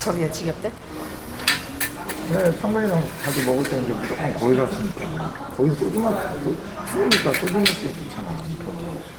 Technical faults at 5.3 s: Opus compression

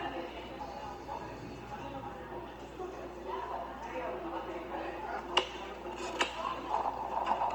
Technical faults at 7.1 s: Opus compression

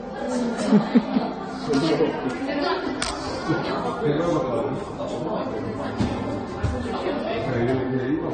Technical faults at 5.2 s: transcoding between lossy codecs

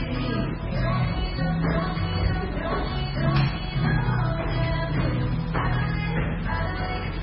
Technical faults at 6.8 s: MP3 compression

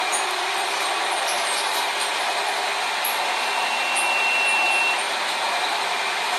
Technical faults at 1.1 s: transcoding between lossy codecs

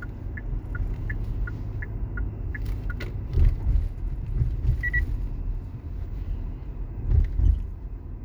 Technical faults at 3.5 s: none

